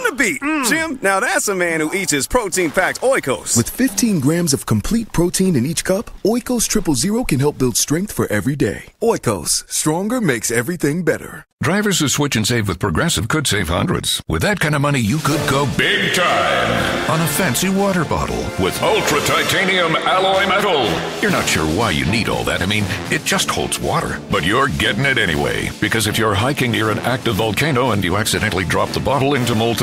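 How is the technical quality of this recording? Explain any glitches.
Nothing here calls for an explanation, since there are no glitches to point to and the recording holds steady all the way along.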